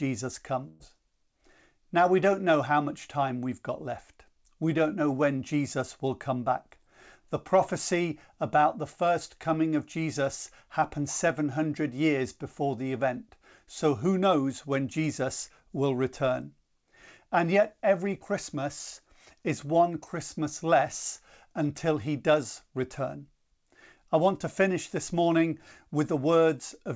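At 0.68 s a burst of packet loss strikes the speech, lasting to 0.82 s. About 120 ms of audio never arrived. The receiver extended the last sound and faded it to fill the gap. Speech then resumes, with that stretch missing.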